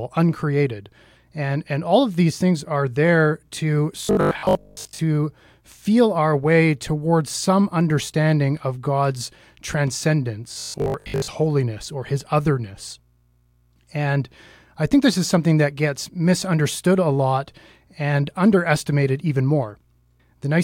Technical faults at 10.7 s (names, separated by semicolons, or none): robotic sound from repeated short buffers